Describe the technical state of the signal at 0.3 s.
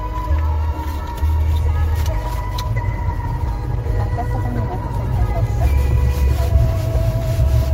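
At 0.3 s the signal is intact, with no dropout, clipping, distortion or other fault audible in the sound at that moment.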